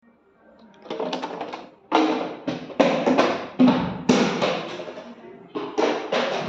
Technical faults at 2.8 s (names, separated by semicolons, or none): none